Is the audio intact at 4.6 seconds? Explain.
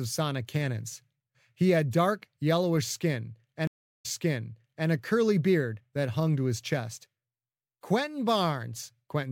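No. The moment falls inside a stream reconnect spanning 3.67 to 4.88 s. The connection dropped, leaving about 369 ms of silence, and a fresh decoder then picked the speech back up 0.84 s earlier than where it broke off, so a stretch just heard plays again. On a waveform this appears as a flat gap followed by a softly rising restart. On a spectrogram it is a blank column across all frequencies, then repeated patterns.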